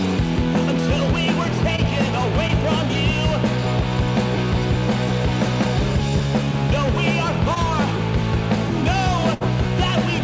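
Audio carried over a call link, with nothing above 8 kHz on a spectrogram, which fits a G.722 stream at 64 kbps, shows short concealed packet loss at 1.76, 2.48 and 7.54 s. Each time, about 20 ms of audio went missing and the receiver patched it by extending the preceding sound before blending back in. This is heard as a quick smear or wobble, and looks like a narrow stretch where the spectrogram's texture freezes, with a small kink in the waveform. A burst of packet loss follows from 9.34 to 9.42 s. About 60 ms never arrived, and the concealment held the last sound for roughly 66 ms while fading it. On a spectrogram that appears as a frozen, fading stretch, and in the waveform as a shrinking envelope before the audio resumes, with the intervening part absent.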